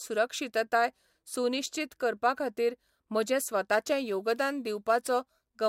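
From 3.72 s, after "सुनिश्चीत करपा खातीर म्हजें", crude rate conversion (48 kHz to 44.1 kHz, samples simply dropped) adds a gritty inharmonic fizz tracking loud, bright speech, not steady hiss.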